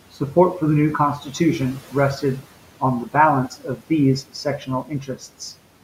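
Speech cut by the noise suppressor, 3.5 to 3.82 s, after "rested on the": mistaking speech for noise, it dipped it about 9 dB, sounding swallowed.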